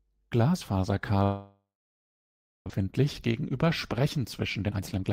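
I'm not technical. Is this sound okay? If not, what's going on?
No. From 1.23 to 2.72 s there is a long network dropout: the connection likely stopped delivering sound, so the receiver stretched the last bit into a fading hiss, then went quiet for about a second. Roughly 0.8 s of the speech is simply gone.

From 2.79 to 5.11 s comes a jitter buffer speed-up. Sound that had piled up late was trimmed away in tiny slices, about a third of a second in total, so the speech plays about 15% fast, at normal pitch but sounding rushed.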